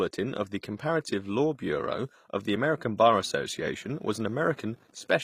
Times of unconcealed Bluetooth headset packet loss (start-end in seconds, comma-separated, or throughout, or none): none